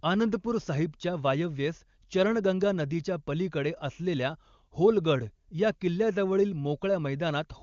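No faults are audible.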